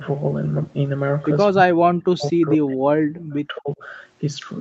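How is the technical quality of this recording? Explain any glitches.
The recording has one clear glitch, with the top end stopping around 8 kHz as expected from an Opus call path. From 1.49 to 3.82 s the speech sinks, at its deepest by roughly 40 dB, for about two seconds in total, likely speech suppressed in double talk, where the echo canceller mistook overlapping speech for echo.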